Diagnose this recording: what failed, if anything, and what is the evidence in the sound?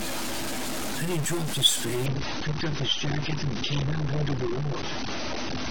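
Distortion sits on the speech from start to finish. The pauses are not silent either. They fill with a steady hiss that tracks the sign of the quiet signal. The stage is the converter or its data wiring. The likely cause is a stuck bit, one data line held at a fixed value. Roughly half the samples are pushed off by that bit's weight, which roughens loud passages and turns near-silence into noise.

At 2.06 s the sound changes abruptly, with no gap. From there to the end the treble is gone, with nothing above about 6.3 kHz, and codec artefacts become more obvious. This is an adaptive stream at a lower bitrate, a network and codec fault. The player switched to a leaner rendition when throughput dropped. The loss of bandwidth points to a move from roughly 96 kbit/s AAC to something near 27 kbit/s.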